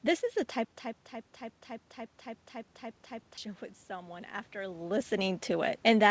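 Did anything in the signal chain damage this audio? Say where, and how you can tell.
Yes. At 0.65–3.38 s there's a stutter with silent gaps: a 172 ms burst repeats every 283 ms, separated by 111 ms of dead silence. Likely a stalled playback buffer.

At 3.87–5.51 s, call processing shows automatic gain rising: after the input drops about 12 dB, voice and room noise swell together by about 4 dB.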